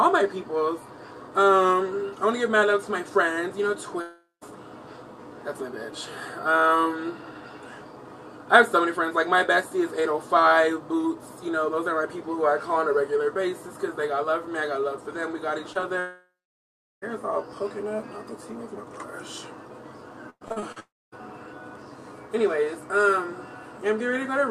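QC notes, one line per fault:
4.01–4.43 s, long network dropout: the last sound continues as a fading buzz, then about 0.15 s of near-silence. Likely lost audio, not a brief patch, since that stretch never returns.
15.73–15.77 s and 15.81–15.84 s, short concealed packet loss: about 20 ms holes each, bridged by continuing the sound, heard as quick smears that rejoin real audio, unlike a dropout's silence.
16.00–17.04 s, long network dropout: a fading continuation, then roughly 0.73 s of silence or low noise, with audio resuming later and about a second of it likely never received.
20.30–20.78 s, repeated packet loss (robotic sound): six holes, the longest 110 ms, patch nearly half this span, giving choppy sound with pieces missing rather than one clean gap.
20.80–21.14 s, long network dropout: directly after the choppy stretch, a fading tail gives way to about 0.25 s of silence, as roughly 0.32 s of audio likely went missing.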